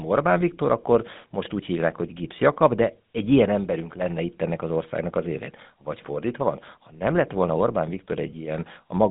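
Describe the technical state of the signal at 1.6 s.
At 1.6 s you're hearing GSM full-rate codec damage, and it runs through the whole clip rather than just that moment. The codec models the vocal tract and drives it with a coarse, regularly spaced pulse excitation, which gives speech that buzzy, gravelly edge, and it's plainly audible here. The band sits roughly 150 Hz to 3.7 kHz with nothing above 3.8 kHz, and the sound fits a 13 kbps stream.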